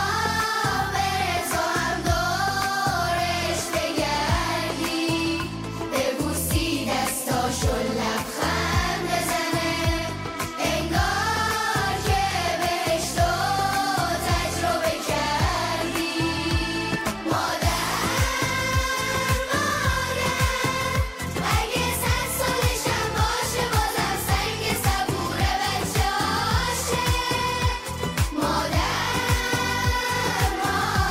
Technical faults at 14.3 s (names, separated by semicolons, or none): none